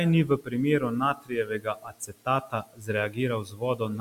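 Speech turns faint and swallowed at 0.25 to 0.55 s, through much of 1.13 to 2.89 s, and at 3.44 to 3.81 s, dropping by about 19, 18 and 12 dB. This is speech cut by the noise suppressor, which mistook quieter speech for the room noise about 23 dB below.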